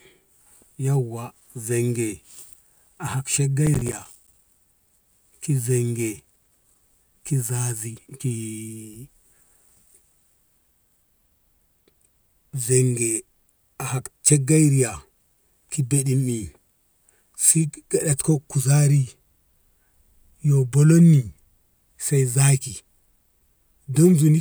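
From 3.66 to 4.39 s, a burst of gritty crackle tears through the speech, a rapid run of tiny hard-edged dropouts that stops once the passage clears. This is processor overload crackle: the processor fell behind and missed a few dozen buffer deadlines in quick succession, and each miss left a brief silent hole with abrupt edges. The spacing of the clicks fits a buffer of around 5 ms.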